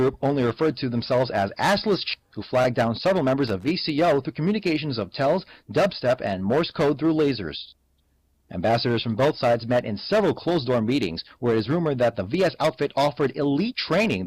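Skip ahead, 2.13 to 2.28 s: a stretch of roughly 0.4 s never reaches the ear. Later audio was already queued, so the receiver dropped the missing portion, either lost in transit or discarded when the jitter buffer overflowed, and carried straight on. The join is nearly seamless, with only about 19 ms of bridging and no silent fill, so the sound lurches abruptly forward and the playback delay shrinks by around 0.4 s.

Jitter buffer speed-up, 2.71 to 3.37 s: the buffer was holding more audio than its target, so the receiver trimmed it down by repeatedly cutting out tiny slices one or a few pitch periods long. Together those cuts remove about 50 ms. Playback runs at 108% of normal speed with its pitch unchanged, so this passage sounds slightly rushed and compressed in time rather than higher.

Loose connector crackle, 3.48 to 3.68 s: a worn or dirty contact rapidly makes and breaks the connection, chopping the signal many times within this 0.2 s window. 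Any DC present on the line turns each break into a pop. The result is a short, irregular burst of scratchy crackle riding over the audio, distinct from the smooth cut of the earlier skip.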